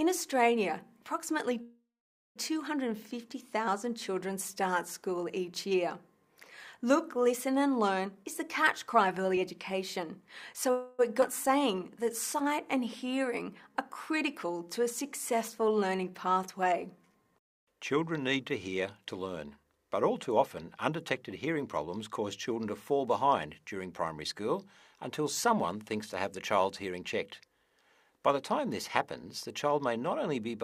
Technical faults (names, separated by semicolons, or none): call audio freeze; jitter buffer speed-up; skip ahead; jitter buffer slow-down